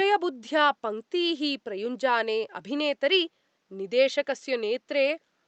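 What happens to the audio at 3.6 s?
Nothing goes wrong at 3.6 s: the speech carries on intact, with only the room's own background noise sitting about 48 dB below it.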